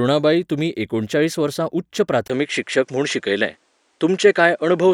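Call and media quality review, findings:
Speech turns duller from 2.28 s to end of clip, nothing above 10.5 kHz, level shifts about 5 dB, faint new background noise. Likely input switched to a poorer device. Brief 20 ms gap at the switch. Tone, level and noise change together, unlike a plain codec bandwidth drop.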